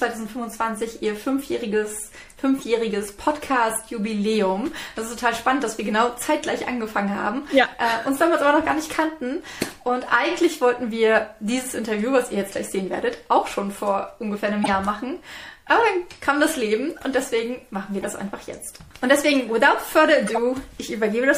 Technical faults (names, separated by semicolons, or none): MP3 compression; corrupt frame decoded